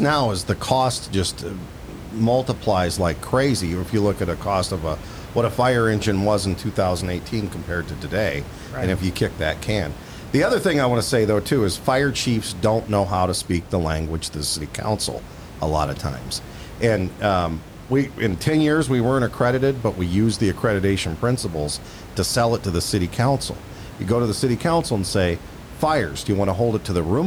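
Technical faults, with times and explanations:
Nothing stood out on listening to this speech recording, apart from the room's own background noise sitting about 16 dB below the speech.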